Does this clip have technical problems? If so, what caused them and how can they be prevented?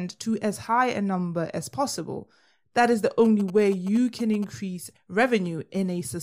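Yes. GSM signalling bursts run from 3.25 to 4.44 s. A nearby 2G phone is sending short groups of radio bursts while signalling. The audio circuit rectifies them into galloping ticks and a 217 Hz buzz, roughly 15 dB below the speech. Keep phones away from the recording chain, or switch them to flight mode.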